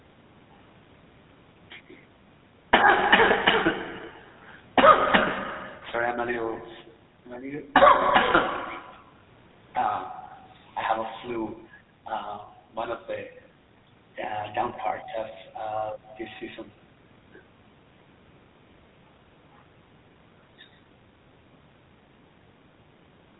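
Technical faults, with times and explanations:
Throughout, GSM full-rate codec: plainly buzzy, gravelly speech with nothing above 4 kHz, from a pulse-driven vocal-tract model that fits a 13 kbps coder.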